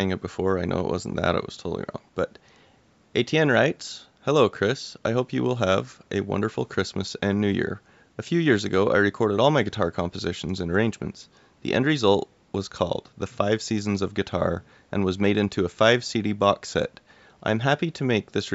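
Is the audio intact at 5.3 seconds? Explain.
Yes, the speech at 5.3 seconds is intact, with nothing wrong at that moment beyond the normal call microphone processing, which trims the deepest bass and leaves nothing above 8 kHz.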